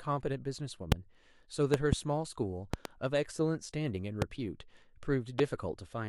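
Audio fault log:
0.92–0.94 s, 1.74–1.95 s, 2.74–2.88 s, 4.22–4.24 s, 5.39–5.42 s: loud pop. Sharp pops about 20 to 25 dB above the speech, doubled at 1.74 s and 2.74 s, with speech continuing underneath. They likely come from electrical pulses, such as static or a switch, added to the signal.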